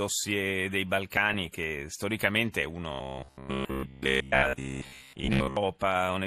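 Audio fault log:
Throughout: MP2 compression. The whole clip has that dull, gurgly, grainy quality you get from low-rate digital radio, and it fits an MPEG Layer II stream squeezed to around 80 kbps. The codec splits the audio into 32 sub-bands and shares out a tight bit budget, so the top bands get switched off and flicker in and out, while the bands left on are quantised so coarsely they turn granular. That's likely what's dulling and roughening the speech here.
2.92 to 5.57 s: robotic sound from repeated short buffers. Right after "storicamente è" the speech turns into a stiff metallic buzz pitched at 66.8 Hz, and it holds for most of that stretch. A 66.8 Hz buzz points to a chunk roughly 15 ms long being replayed over and over. New audio is likely arriving late, so the playback loops that last bit to fill the gap and skips the real audio. The speech still loosely follows its shape but sounds mechanical.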